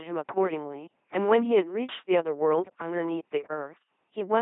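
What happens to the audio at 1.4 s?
At 1.4 s the speech sounds buzzy and mechanical, like a robot, with nothing above about 3.7 kHz. This is LPC-10 vocoder damage across the whole clip, consistent with 2.4 kbit/s coding. A simple filter driven by either a pulse train or noise rebuilds each moment.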